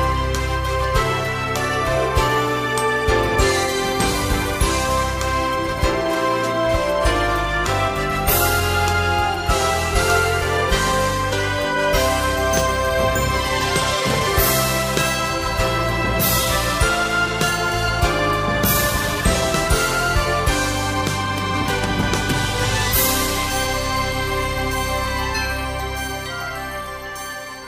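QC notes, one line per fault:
No technical faults are audible anywhere in the signal.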